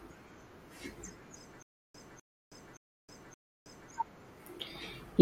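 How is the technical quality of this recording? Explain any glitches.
The recording has one clear glitch: a stutter with silent gaps from 1.62 to 3.91 s. A 252 ms fragment of speech repeats four times, each followed by 320 ms of digital silence, giving a 572 ms cycle. This likely comes from a stalled stream or player replaying its last buffer at each retry, so the speech meant for that stretch is lost. On a waveform it shows as identical blocks separated by flat silent stretches; a spectrogram shows repeated patches with fully blank columns between them.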